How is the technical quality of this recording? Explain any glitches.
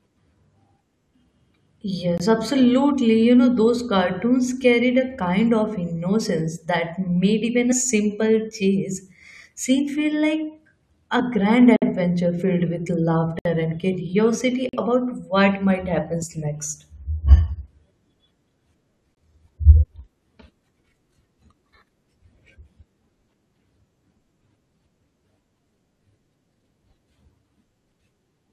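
The speech has two kinds of repeated dropout.

Blocks of digital silence occur at 2.18 s, 11.76 to 11.82 s (before "filled with"), 13.39 to 13.45 s, 14.69 to 14.73 s, and 19.15 s. They last 21 to 64 ms. The output buffer went unfilled, which fits 1024- and 2048-sample blocks. Each one is a short hole.

Compressed frames skipped occur at 7.71 s (between "innocence that made even" and "simple chase scene feel"), 11.19 s, and 16.21 s (after "what might happen"). Whole 21.3 ms frames were dropped, about 40 to 70 ms of audio. The sound jumps forward.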